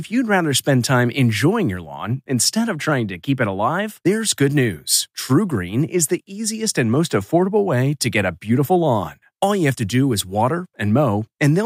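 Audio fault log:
Nothing to flag here; this speech recording comes through without any technical trouble at all.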